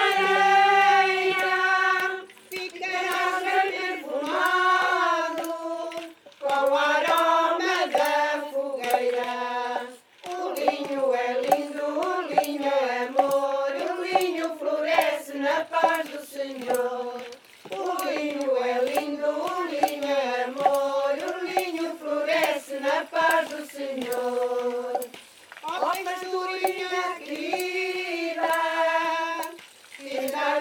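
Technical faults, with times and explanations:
No technical faults, with times and explanations, are present in this clip.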